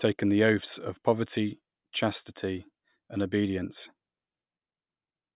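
Nothing stood out as a technical fault when listening to this speech recording.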